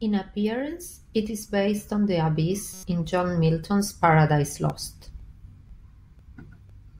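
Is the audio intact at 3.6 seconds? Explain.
Yes, the audio is intact at 3.6 seconds, with no fault at that moment.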